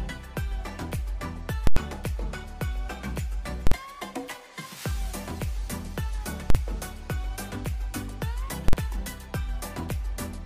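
Loud bangs hit at 1.67 to 1.77 s, 3.67, 6.50 and 8.68 s. These are invalid numbers at full scale: a calculation blew up and pinned the output at maximum. The first runs about 93 ms, fitting a 4096-sample block. The others run about 46 ms, fitting 2048-sample blocks.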